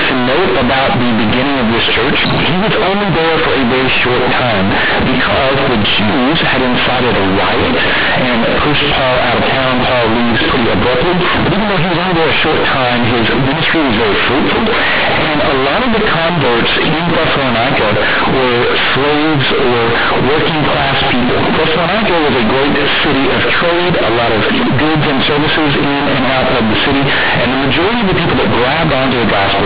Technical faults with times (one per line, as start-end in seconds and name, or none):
0.00-29.66 companded audio read as linear